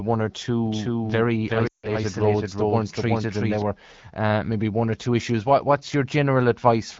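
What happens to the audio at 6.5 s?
At 6.5 s the speech comes through intact, carried by the AMR wideband (HD Voice) codec at 12.65 kbit/s with no fault at that moment.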